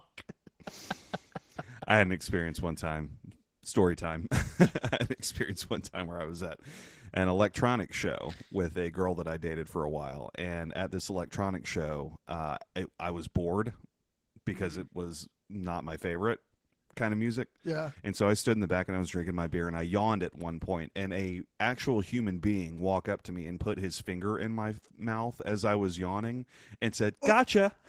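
From start to finish the speech sounds somewhat hoarse and faintly robotic, with a grainy, smeared quality that is plainly audible. This is Opus voice compression working at a low rate that fits about 16 kbps, in hybrid mode. SILK's linear-prediction coder handles the lower band, and a thin CELT layer codes the top up to full bandwidth. Too few bits are left for the excitation, so it is coded coarsely in 20 ms frames, which roughens the voice.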